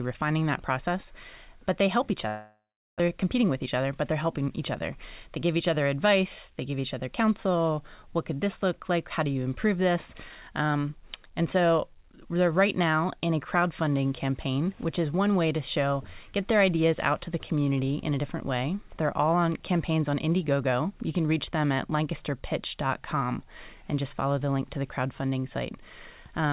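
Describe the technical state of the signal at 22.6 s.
At 22.6 s the speech comes through intact, with no fault at that moment beyond the narrowband character of the G.711 call path, which leaves nothing above 4 kHz.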